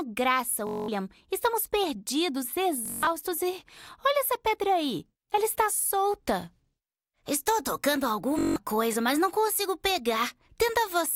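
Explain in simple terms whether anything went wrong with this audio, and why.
Bluetooth stutter at 0.67–0.88, 2.86–3.07 and 8.39–8.56 s: wireless data arrived late, so the receiver repeated tiny slices, buzzing, then skipped ahead.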